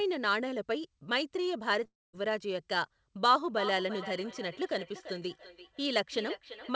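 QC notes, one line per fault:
1.84 s, short concealed packet loss: about 20 ms of speech failed to arrive, and the decoder covered roughly 13 ms of it by extending the preceding sound before easing back in. The result is a brief smear or wobble. A spectrogram shows a thin column of blurred, repeated harmonics.
1.87–2.15 s, long network dropout: the audio stops for around 260 ms. A fading synthetic tail continues the last sound, then about 200 ms of near silence follows before speech resumes mid-stream. This is likely a network outage. The waveform shows a decaying stub and then a flat gap.
3.49–6.76 s, feedback echo between two devices: from 3.49 s to the end, each phrase comes back about every 0.3 s, peaking at about 13 dB below the speech. The repeats sound thinner and more ringing each time. A spectrogram shows faint, regularly spaced copies trailing every syllable.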